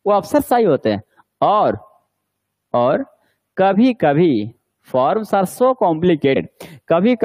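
At 1.73 to 1.75 s and again at 6.35 s, compressed frames are skipped. The audio jumps ahead by roughly 50 ms, then roughly 100 ms, which fits two and four lost frames of about 23.2 ms.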